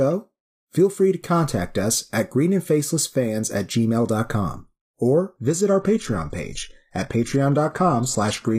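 Speech recording with an adaptive stream at a lower bitrate from 5.36 s to the end: quality drops abruptly without a gap, treble is cut above 12.3 kHz, consistent with switching from 96 kbit/s AAC to 16 kbit/s HE-AAC after bandwidth fell.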